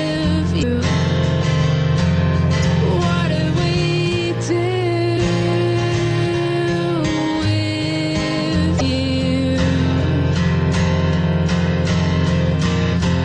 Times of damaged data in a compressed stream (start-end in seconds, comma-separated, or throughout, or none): 0.59-0.63, 2.60-2.65, 5.14-5.18, 8.77-8.81